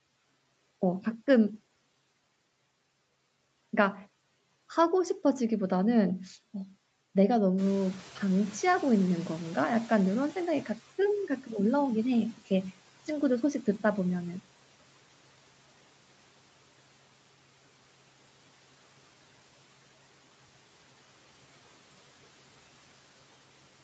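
At 7.57 s the room noise jumps by about 13 dB, and the noise suppressor is caught out. Its estimate of the background trails behind, so the noise first comes through with less reduction. It then sinks by about 12 dB over roughly 4.8 s, settling by 12.38 s.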